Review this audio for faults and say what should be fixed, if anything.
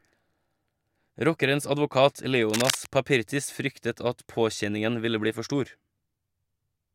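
Cable scratch noise, 2.50 to 2.87 s: a dense, uneven scratching burst at nearly speech level, likely a worn connector shifting, its contact resistance jumping. Replace or clean suspect leads and connectors, and secure cables so they cannot move during recording.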